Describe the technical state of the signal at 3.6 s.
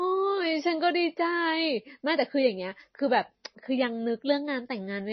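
At 3.6 s, as throughout, there is likely MP3 compression: the spectrogram is empty above a hard 6.1 kHz cut, and weak frequency lines flicker out, sounding watery and swirly.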